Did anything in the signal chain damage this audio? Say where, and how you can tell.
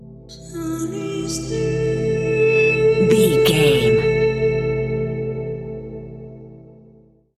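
Yes. A loudspeaker feedback squeal appears from 2.16 to 2.83 s. It is a single tone at 2.6 kHz that swells over roughly 0.4 s and peaks about 5 dB above the programme before it stops. The fault sits in the acoustic and analogue path between microphone and loudspeaker. The microphone picked up its own loudspeaker, and the loop gain at 2.6 kHz exceeded unity. That one frequency therefore reinforced itself on each pass.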